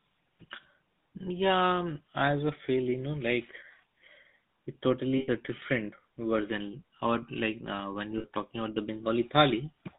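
GSM full-rate codec, throughout the whole clip: the speech has been carried through the original GSM coder, which models the vocal tract as a filter and drives it with a sparse, regularly spaced pulse excitation, consistent with 13 kbit/s full-rate coding. The line is confined to roughly 150 Hz to 3.7 kHz, so the top of the speech is gone, and the coarse excitation gives the voice a plainly audible buzzy, gravelly roughness.

Lost GSM frames, at 5.18 to 5.29 s and at 8.18 to 8.25 s: in each gap the decoder had no good data, so it kept re-using the parameters from the last frame it received instead of decoding new speech. The first dropout lasts about 100 ms, which fits five 20 ms frames, and ends just before "different version". The second lasts about 60 ms, which fits three frames, and falls between "like uh when" and "talking about the". Each one is heard as a brief, rough, metallic ringing hold on the sound.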